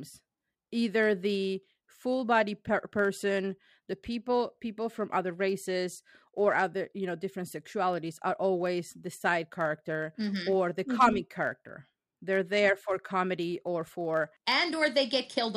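A block size mismatch (truncated) runs through the whole speech recording, from start to finish. One processing stage is handing over blocks longer than the next stage takes in, so the tail of every block is discarded. Each cut leaves a small discontinuity, and at roughly 92 per second those repeats fuse into a steady buzz near 92 Hz under the speech. Playback speed stays at its normal rate, with pitch unchanged.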